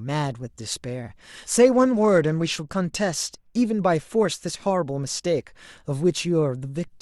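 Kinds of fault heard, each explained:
Bluetooth SBC bit pool drop: from 1.71 to 3.57 s the speech turns dull and gritty as the encoder starves its upper sub-bands and coarsely quantises the rest, consistent with a bit pool falling from about 28 to 12. Unlike a plain low-pass filter, grainy noise rides along, and unlike packet loss, the sound never drops out.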